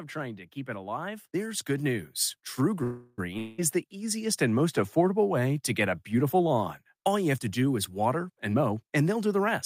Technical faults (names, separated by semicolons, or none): automatic gain rising; call audio freeze; long network dropout; jitter buffer speed-up